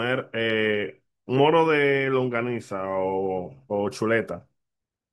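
A speech recording, with nothing technically wrong to be heard in it.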